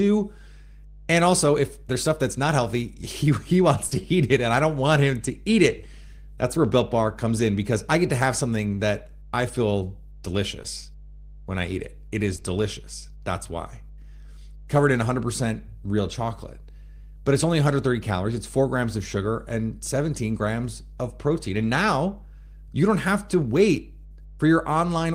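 Right from the start there's mains hum under the whole speech clip: a steady 50 Hz drone, fairly prominent at roughly 15 dB below the speech, with a few low harmonics riding on it. That's the power line leaking into the signal, most plausibly through a ground loop or a transformer sitting near the cabling. It never lets up, so it's most obvious in the gaps between phrases.

Then there are three spots of short concealed packet loss. The first runs from about 3.87 to 4.03 s, where around 40 ms of audio never arrived and the decoder patched it by carrying the previous sound forward before easing back into the real signal. It also stretches things by a hair, around 10 ms. The other two are shorter, about 20 ms each, at 10.62 to 10.66 s and 12.36 to 12.40 s. Each one comes across as a quick smear or wobble in the speech.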